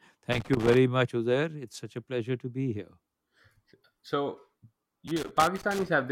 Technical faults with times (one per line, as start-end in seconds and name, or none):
0.32-0.77 loose connector crackle
5.08-5.88 loose connector crackle